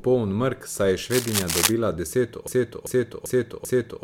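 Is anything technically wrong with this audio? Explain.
Yes, two faults are audible in this speech clip.

From 1.10 to 1.74 s there is cable scratch noise. Dense, uneven bursts of scratching and rustling sit over the speech, roughly as loud as the speech itself. The likely cause is a worn cable, connector or control being moved so its contact resistance jumps about.

From 2.47 s to the end there is a broken-record loop. A 0.39 s fragment repeats exactly, back to back, four times. The likely cause is a stalled player, encoder or stream resending its last held piece. The speech that belonged there is lost.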